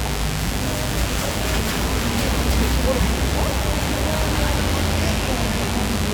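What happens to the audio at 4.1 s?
At 4.1 s, as throughout the clip, mains buzz sits fairly close beneath the sound: switching spikes twice per 50 Hz cycle produce a raspy drone, seen as stacked harmonic lines into the kilohertz range and waveform spikes every 10 ms.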